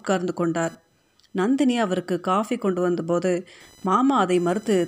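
A faint buzz with a chirping edge, pulsing at around 1 kHz and sitting roughly 35 dB below the speech, runs under the whole recording. It is computer activity noise: processor or graphics load shifting the ground shared with the audio circuit.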